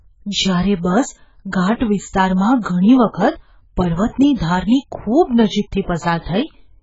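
From start to finish the speech has nothing above 7.6 kHz, sounds dull and smeared, and sibilants carry a warbling, fizzy texture. That points to heavy AAC compression, likely AAC-LC at a very low bitrate near 12 kbps. Unlike a plain low-pass filter, it leaves holes in the spectrum or fills bands with substitute noise.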